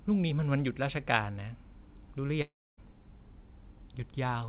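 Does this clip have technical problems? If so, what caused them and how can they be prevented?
Yes. At 2.42 s the speech breaks off and the receiver's concealment stretches the last sound into a fading buzz, then it goes quiet until 2.79 s, with about 0.36 s of speech simply gone. That's likely a long network dropout. A steadier connection, or a deeper jitter buffer with redundancy on the G.711 call path (which tops out at 4 kHz), would help.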